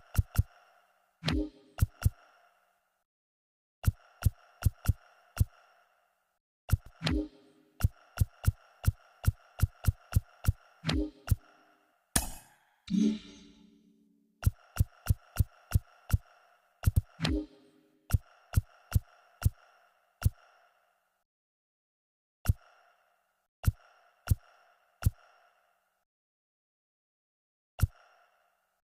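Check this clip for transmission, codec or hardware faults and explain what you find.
Overlapping chunks show up twice, at 6.86–6.96 s and 16.96–17.06 s. Each 10 s chunk begins 100 ms before the previous one ends, so that slice plays twice, heard as a stutter. The waveform shows a repeated segment with a discontinuity at each join, and the spectrogram shows a thin vertical seam.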